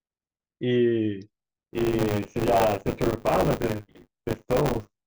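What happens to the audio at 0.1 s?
Nothing goes wrong at 0.1 s; the audio is intact at that moment.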